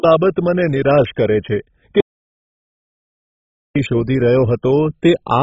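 MP2 compression, throughout: the speech sounds dull and gurgling, with nothing above 7.6 kHz, likely from Layer II coding at a very low bitrate switching off the upper sub-bands.

Audio dropout to silence, 2.00 to 3.76 s: the speech cuts to dead silence for about 1.75 s, likely a lost input while zeros kept being written.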